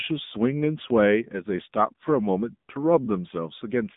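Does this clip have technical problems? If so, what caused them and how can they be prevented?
Yes. Throughout the speech there is a thin, boxed-in telephone sound with a buzzy, synthetic edge. Nothing is audible above about 3.8 kHz, and the band sits between 150 Hz and 3.7 kHz. This is the AMR narrowband mobile codec. It samples at 8 kHz and rebuilds speech from a vocal-tract model fed by 2 to 10 pulses in each 5 ms. The plainly audible damage points to a mode near 8 kbps. Record or transmit through a wideband path instead of AMR-NB.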